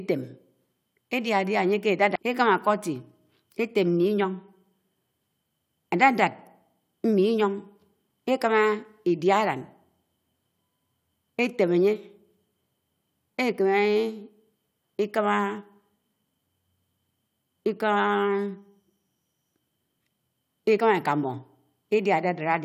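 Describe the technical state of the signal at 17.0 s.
At 17.0 s the speech signal is intact, with no audible fault at that moment.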